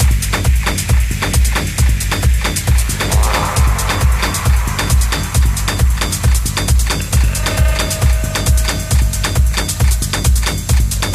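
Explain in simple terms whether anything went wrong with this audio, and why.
DECT cordless phone buzz runs through the whole recording, from start to finish, about 11 seconds. It is a steady, thin buzz sitting well below the main sound. A nearby cordless phone or its base station sends a short radio pulse 100 times a second, and the audio electronics turn those pulses into sound. That gives a hum at 100 Hz, rich in higher overtones, which is why it sounds buzzy rather than smooth.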